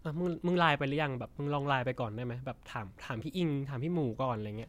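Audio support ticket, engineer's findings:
No audible defects found in the speech signal: level, continuity and tonal balance hold steady throughout, with nothing requiring escalation.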